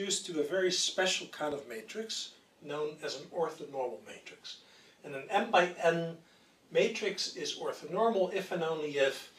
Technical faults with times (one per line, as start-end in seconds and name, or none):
1.52-1.55 loud pop